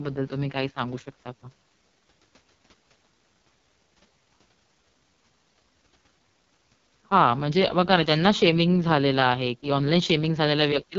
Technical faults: AMR wideband (HD Voice) codec

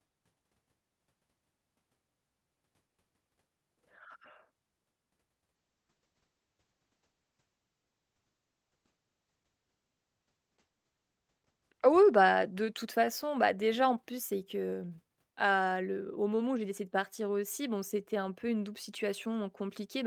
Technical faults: call bitrate drop

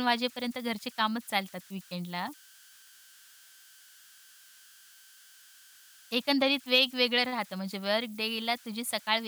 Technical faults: converter idle tones

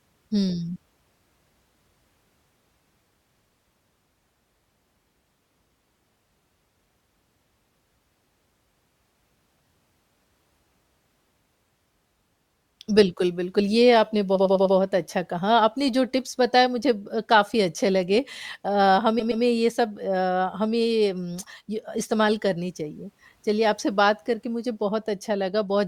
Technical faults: repeated frames

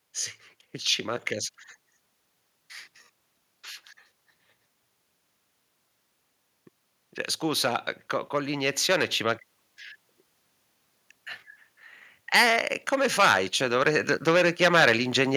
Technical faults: automatic gain rising

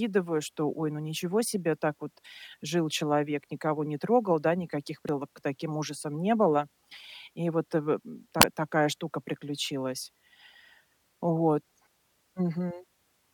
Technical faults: damaged data in a compressed stream

